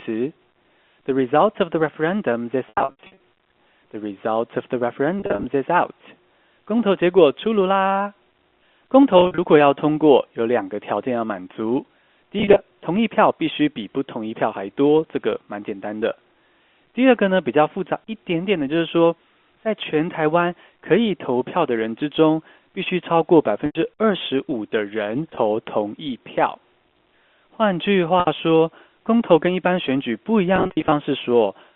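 Packet loss with pitch repetition occurs at 2.66–3.17, 5.20–5.44, 9.18–9.38, 12.39–12.59, 23.66–23.75, 25.35–25.37, 28.20–28.27 and 30.56–30.92 s. The receiver fills each lost stretch by repeating the last pitch period. That makes brief buzzy, held sounds, including in the scattered 380 ms of losses around 2.7–3.2 s, all within the 250–3400 Hz band of the G.711 telephone line.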